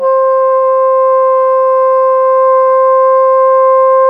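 No technical faults are audible.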